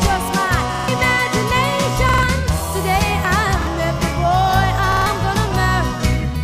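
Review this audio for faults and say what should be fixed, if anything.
Repeated buffer at 0.74–0.88 s, 2.09–2.23 s, 3.62–3.67 s and 4.92–5.06 s: fresh audio arrived late, so the same 46 ms block replayed with hard joins, three extra times at each stutter except 3.62 s (once), which fits a 2048-sample buffer. Each stutter skips roughly 150 ms of audio, and the one at 3.62 s skips about 50 ms. To fix this, give the playback path more headroom by raising buffer depth or thread priority so each block is ready before the device asks for it.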